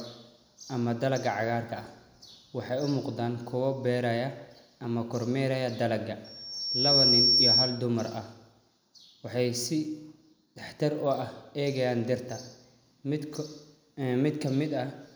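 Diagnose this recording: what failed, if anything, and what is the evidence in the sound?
A loudspeaker feedback squeal occurs in the acoustic and analogue stage, where the microphone hears its own loudspeaker. Right after "beeraya ama kormeerayo dalaga", at 6.24 s, a pure tone near 5.5 kHz swells over roughly 0.7 s to sit about 10 dB above the speech, then stops at 7.87 s. The loop gain exceeded one at that frequency. A spectrogram shows one bright horizontal line, and the waveform envelope balloons.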